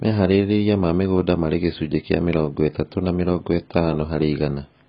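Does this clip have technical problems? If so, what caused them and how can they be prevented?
Yes. AAC compression damage runs throughout. Nothing sounds above 5.1 kHz, and the speech is dull and smeared. This heavy damage likely comes from AAC-LC at around 16 kbps. To prevent it, encode at a higher bitrate.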